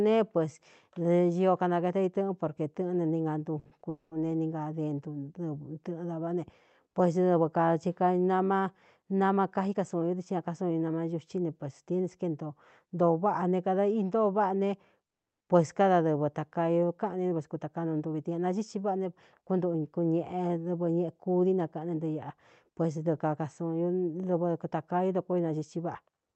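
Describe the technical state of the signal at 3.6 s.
At 3.6 s there is a short stall from a late packet, from 3.59 to 3.67 s, then again at 3.69 to 3.73 s. Each time, the jitter buffer ran dry and the receiver held the last sound for 60 ms and then 20 ms, giving a slight buzz or dip. Unlike packet loss, it then resumes where it stopped, with nothing missing.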